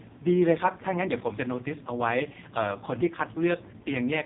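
Speech passed through the AMR narrowband mobile codec at a very low bitrate, and the heavy damage fits AMR-NB's 5.15 kbps mode. The codec resamples to 8 kHz and rebuilds the voice from a vocal-tract model excited by only a few pulses per 5 ms subframe. Throughout, nothing above 3.7 kHz survives, so the sound is muffled and phone-like. The sparse excitation leaves the speech buzzy and synthetic.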